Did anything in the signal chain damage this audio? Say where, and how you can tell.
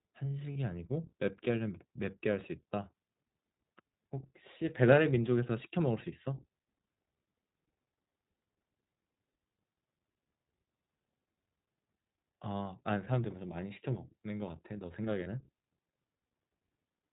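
Yes. At the codec stage the speech runs through the iLBC codec for the whole clip, at 15.2 kbps with 20 ms frames. Each frame's excitation is coded on its own and nothing above 4 kHz survives, so the voice sounds band-limited, slightly rough and synthetic. The damage is plainly audible throughout rather than tied to any moment.

On the network side, lost iLBC frames break the audio twice: about 40 ms at 0.52 s, which fits two frames, and about 20 ms at 15.24 s, which fits one. In each gap the decoder fills in by repeating the last pitch cycle blended with noise, heard as a brief held, buzzy vowel. Because frames decode independently, the speech is clean again right after each gap.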